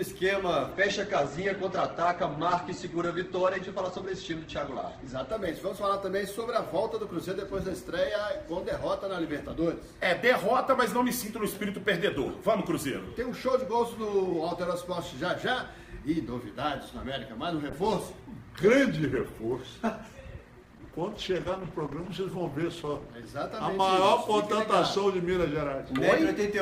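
From 0.72 to 6.88 s there's a call bitrate drop: the encoder gets starved, sounding like roughly 12 kbps, and highs vanish above 8 kHz, so it's muffled and rough. Another hits 17.7 to 23.36 s, somewhat less severe, around 15 kbps.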